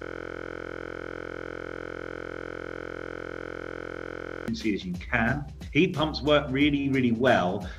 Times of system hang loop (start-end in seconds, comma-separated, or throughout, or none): 0.00-4.48